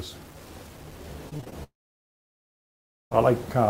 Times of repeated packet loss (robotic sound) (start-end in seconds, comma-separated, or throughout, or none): 1.29-1.54